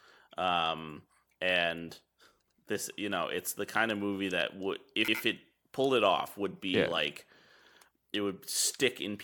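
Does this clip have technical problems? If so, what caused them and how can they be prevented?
Yes. The speech stutters at 2.48, 5.08 and 7.68 s... let me state precisely: at 2.48 s after "um and", at 5.08 s after "of movie that would", and at 7.68 s after "would be yeah like". Each is an overlapping chunks fault. About 100 ms replays at every join, spaced 2.6 s apart. To prevent it, align chunk boundaries so each chunk starts exactly where the previous one ended.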